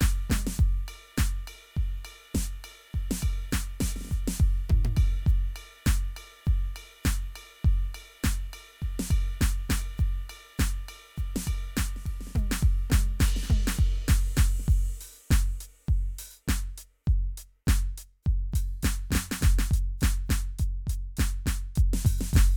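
From 18.52 s to the end of the music, a doubled audio track appears: a second full-band copy trails the original by roughly a third of a second, at about the same level. It cuts in abruptly, with no decay or room colouring, so everything sounds smeared and stuttered rather than reverberant. This is likely caused by the signal being captured again through a slower path, or by an edit that leaves two misaligned copies.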